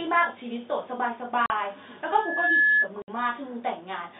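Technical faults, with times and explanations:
1.46–1.50 s and 3.02–3.08 s: packet loss filled with silence. The sound drops out completely for 40 ms and then 60 ms, with abrupt edges. Lost packets were replaced by digital silence, and both gaps are multiples of 20 ms, which fits 20 ms packets.
2.10–2.88 s: loudspeaker feedback squeal. A single 1.7 kHz tone swells over about half a second until it sits around 10 dB above the speech. The microphone is picking up its own loudspeaker, and at that frequency the loop gain exceeds one, so the tone keeps building.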